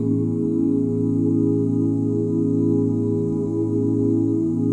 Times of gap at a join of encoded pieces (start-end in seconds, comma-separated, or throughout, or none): none